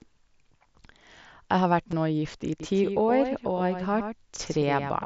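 At 1.91 s there is a barely noticeable catch in the speech, a brief smear where the waveform seems to repeat itself for an instant before carrying on. This is concealed Bluetooth headset packet loss: about 15 ms of audio, which fits two short headset packets, never reached the phone, and the receiver filled the gap by continuing the sound with a closely matching stretch of what it had just played. Because the gap is so short, the patch is almost hidden, without any sustained buzz.

From 2.60 s to the end, every sound is shadowed by a fainter copy arriving about a tenth of a second later. It reads as a slapback rather than a room echo, with no tail and no change in tone from the original. The copy comes in abruptly at 2.60 s and stays roughly 10 dB below the main signal. This is a doubled audio track, most likely the same speech being picked up a second time through a slower path and mixed in alongside the first. 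The full-band echo sits over the mSBC headset sound, which carries speech up to 8 kHz with a light grain on louder passages.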